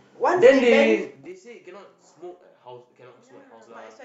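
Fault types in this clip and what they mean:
zipper noise: From 1.02 to 1.37 s a quick run of small ticks rides on the speech as its level falls by roughly 20 dB, giving a short zipping texture instead of a clean fade. The gain is being lowered in 3 dB jumps, around twenty a second, with no smoothing between them, so each abrupt jump in level puts a tiny discontinuity into the waveform that is heard as a click.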